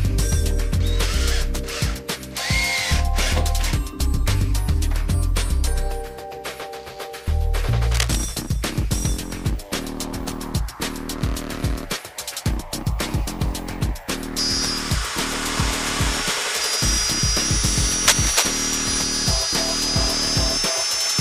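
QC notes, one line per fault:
7.91–8.17 s, cable scratch noise: a worn cable or connector was likely shifted, so its contact resistance jumped about rapidly and broke up the signal path. That puts a dense, uneven burst of crackle over the sound for about a quarter of a second, sitting a little below the main audio, heard as a brief scratchy rustle.
18.07–18.59 s, cable scratch noise: likely the same contact problem returns, roughly half a second long and now about as loud as the main audio, so the scratching briefly competes with it.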